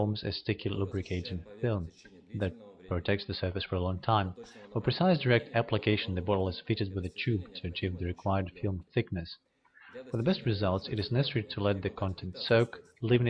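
No technical faults are audible.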